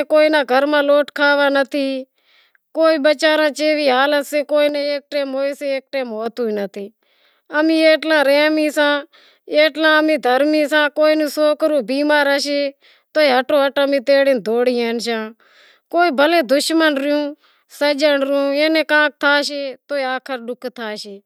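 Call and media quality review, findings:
Speech level drops abruptly by about 6 dB, 4.69–6.26 s, recovering just as sharply. Waveform: envelope steps down, full bandwidth kept on spectrogram, no gap. Likely one channel drops out before mono sum; content shared by both channels halves.

Same step, about 6 dB, 19.48 s to end of clip, no recovery. Flat-edged envelope drop, spectrum intact. Likely same stereo-path loss, one side absent through the close.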